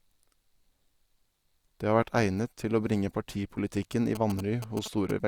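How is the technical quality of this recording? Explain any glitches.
One glitch near the end. From 4.15 to 5.11 s, after "til å bringe partipolitikken", GSM signalling bursts from a nearby 2G phone get rectified by the audio circuit. They come out as a galloping dit-dit-dit of short 217 Hz buzzes roughly 10 dB below the speech.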